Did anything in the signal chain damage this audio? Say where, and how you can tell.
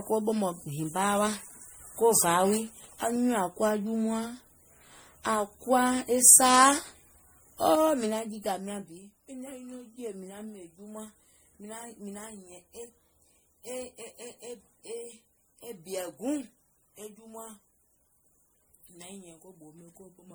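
Yes, at the codec stage, throughout the speech: generation loss, likely from around five passes through MP3 at 64 kbit/s. Content reaches 20.9 kHz, so this isn't lowpassing. The swirl, hollowness and blurred attacks exceed what a single encode would leave, as each re-encode requantises on a shifted frame grid.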